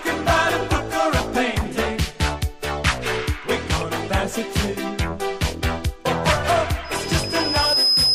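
At 6.84 s a loudspeaker feedback squeal starts and runs to the end of the clip at 8.14 s. A single tone near 5.1 kHz swells over about a second until it sits roughly 5 dB above the rest of the sound. The microphone has picked up its own loudspeaker, and at that one frequency the loop gain passed unity. That gradual, self-feeding build-up sets it apart from a steady interference whine, which would arrive already at full strength.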